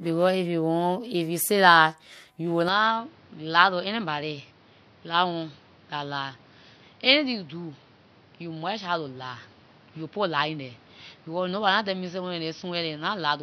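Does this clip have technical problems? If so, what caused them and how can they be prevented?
Yes. From 2.69 s to the end, the speech turns duller and boxier, with nothing above 6 kHz, and it drops in level by roughly 5 dB with no silence at the change. A new noise floor appears well below the speech. The likely cause is an input switched to a poorer device, a narrower-band microphone or headset call profile with its own tone and noise. On a spectrogram the energy above 6 kHz is sharply cut off from 2.69 s onward, and the waveform shrinks by roughly 5 dB there. To prevent it, lock the recording input to one device and disable automatic switching to headset or call profiles.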